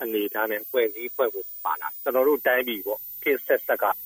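A switching supply whistle runs through the whole clip, a thin high tone wandering between about 14.0 and 14.4 kHz, roughly 15 dB below the programme. It comes from a switching power supply, its pitch shifting as the load changes.

From 0.75 s to 2.10 s the audio plays about 5.7% fast and sits about 95 cents sharp, nearly a semitone, then snaps back to normal speed and pitch. This is likely a drift correction step, where clock-matching software changed the playback rate in one jump to rebalance its buffer.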